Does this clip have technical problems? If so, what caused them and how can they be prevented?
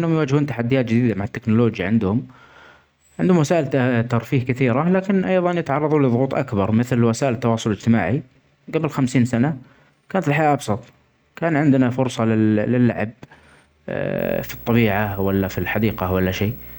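Yes. Video or display buzz enters at 14.18 s and lasts to 16.79 s. A 59.94 Hz buzz with hash sits well under the speech, plus a 15.7 kHz line whine. Keep audio cables away from screens and video leads.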